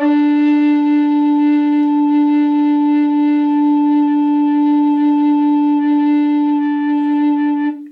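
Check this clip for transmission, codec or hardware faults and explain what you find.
Nothing in the music points to a transmission, codec or hardware problem: the signal stays continuous and steady throughout, with no audible disturbance at any point.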